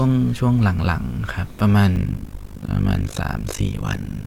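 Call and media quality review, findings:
Overlap-add ripple, 1.96 s to end (4.26 s). Fast robotic tremolo, level swinging about 60 dB around 50 times a second. Probable component: frame resynthesis stage. Window overlap not summing to constant gain, so level dips once per frame.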